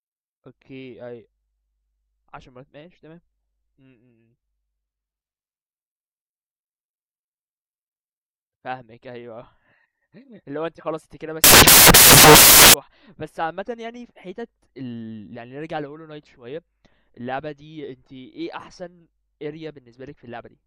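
From 11.44 s to 12.74 s the speech gives way to loud, harsh broadband noise: samples built from the wrong bytes. The reader misassembles each sample's bytes, so the rapidly changing low-order bits land in the most significant position, producing broadband hiss.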